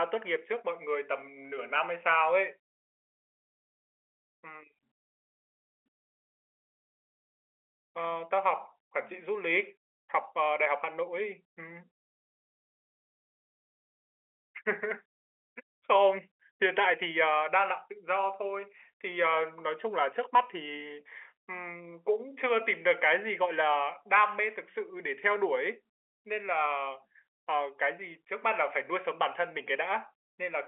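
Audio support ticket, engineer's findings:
Findings: no fault found; the speech sits in the normal G.711 telephone band, with nothing above 3.8 kHz, as expected for the line.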